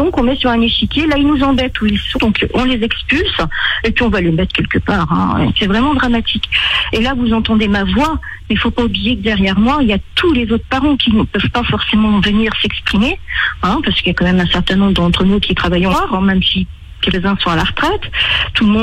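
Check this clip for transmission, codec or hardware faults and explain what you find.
The clip has compressed frames skipped, at 2.14 to 2.19 s, 15.89 to 15.95 s and 17.09 to 17.15 s. Whole compressed frames were not played, either missing from the file or rejected by the decoder as damaged. The audio jumps ahead past them, by about 150 ms, 200 ms and 100 ms. Each gap fits a few frames of about 46 ms. Each join is heard as a short blip or click, and the sound resumes slightly further on.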